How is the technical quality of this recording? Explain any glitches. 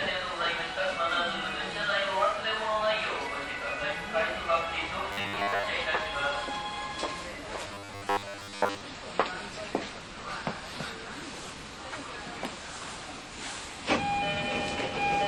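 Two stretches of robotic sound from repeated short buffers, at 5.12–5.66 s and 7.68–8.81 s, spoil the quality. The likely cause is audio arriving too seldom, so most of each stretch is replaced by a repeated fragment of about 10 ms, which imposes a fixed, metallic 100 Hz buzz over the sound.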